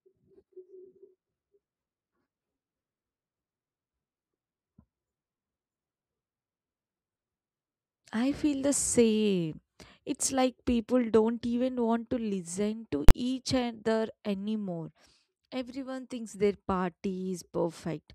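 At 13.09 s the speech is interrupted by a single hard bang, caused by invalid numbers at full scale. A calculation produced infinite or invalid values, and the output was pinned at one extreme value for a block of about 20 ms. The block is so short that its sudden jump up and its drop back merge into one loud report. Unlike clipping, where the waveform is squared off but still follows the speech, nothing of the speech survives underneath.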